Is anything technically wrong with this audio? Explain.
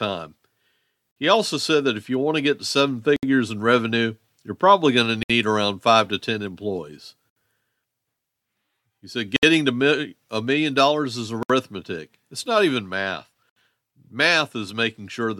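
Yes. The speech drops into brief silences at 1.11, 3.16, 5.23, 7.30, 9.36, 11.43 and 13.50 s, roughly every two seconds. The first lasts 50 ms and the rest about 67 ms each, with smeared edges, before the speech resumes where it left off. This is a gap at a join of encoded pieces: the audio was encoded in separate segments and joined untrimmed, so each segment's start-up delay and padded final frame remain as dead air.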